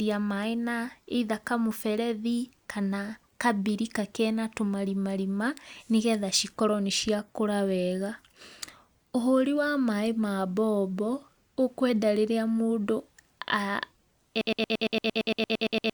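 Speech, with a broken-record loop at the end. From 14.41 s the audio locks onto a fragment about 0.11 s long. That fragment repeats exactly, back to back, 13 times. The loop runs until the clip ends. It gives a rapid, mechanical stutter in place of the speech that should have followed. The likely cause is a stall in the player, encoder or stream, which kept resending the last piece it held. The speech from that final stretch is lost.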